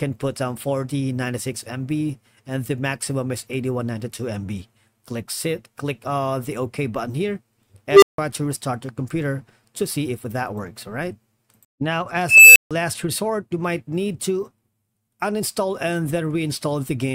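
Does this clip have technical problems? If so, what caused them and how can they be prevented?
Yes. An unstable filter blows up twice. At 7.90 s a tone around 400 Hz swells over 0.12 s until it clips, then cuts to silence for 0.16 s. At 12.29 s a tone around 3 kHz builds over 0.27 s and drops out for 0.15 s. In both cases a recursive filter's coefficients pushed its feedback past unity, so the output ran away until it overflowed and reset. To prevent it, check pole positions and clamp coefficient updates so they stay inside the stable region.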